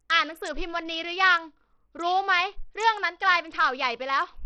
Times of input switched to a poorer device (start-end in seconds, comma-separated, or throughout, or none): none